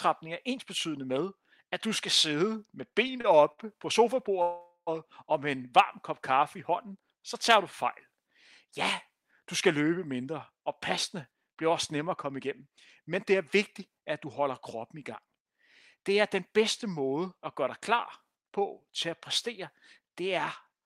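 Right after "du skal sidde med", from 2.89 to 3.60 s, repeated stalls (stutter) break the speech with four brief held-over fills, the longest 61 ms. They drag the flow, yet nothing is skipped.

From 4.42 to 4.89 s, just before "og med", a call audio freeze stretches the last sound into a fading buzz that ends in 90 ms of silence. This is one long 0.45 s hold rather than a stutter, likely from packets held up until the jitter buffer ran dry.

Jitter buffer speed-up follows from 11.27 to 13.35 s at 107% and from 13.79 to 16.61 s at 106%, ending before "måde at gøre dig". Roughly 0.15 s and 0.2 s of pitch periods are trimmed, so the speech hurries while its pitch stays unchanged.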